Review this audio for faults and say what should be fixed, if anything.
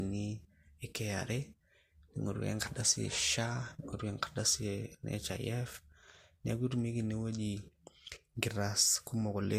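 Throughout the speech there is no content above 16.4 kHz, and the first encoding's lossy artefacts are still present even though the file is a high-bitrate MP3. The likely cause is low-bitrate audio saved at a high bitrate. The sound points to an earlier Vorbis encode at around 46 kbit/s that was then re-encoded to MP3 at about 256 kbit/s. The larger second encode cannot recover what the first one removed. To prevent this, encode once from the original uncompressed source instead of from a lossy intermediate.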